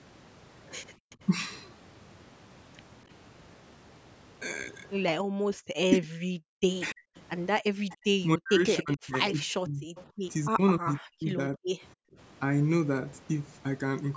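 It's a speech recording from a call, and the echo canceller is most likely behind all of it. The background is gated by the echo canceller at 0.97–1.1 s, 5.23–5.7 s and 12.05–12.17 s. The room tone gets yanked down by about 40 dB in the first two spots and about 28 dB in the last, then pops back when the canceller releases. There's also echo leak, with a delayed copy of the voice trailing about 280–290 ms behind. It's barely there at 1.1–1.16 s, faint at 6.9–7.94 s, and quite noticeable at 9.96–10.97 s. That's likely the far end's loudspeaker sound getting past its canceller and coming back. Across 5.98–11.77 s the talker keeps dipping deeply or chopping out, around three seconds in total. That's speech suppressed in double talk, likely because both sides were talking and the canceller ducked everything it couldn't sort out.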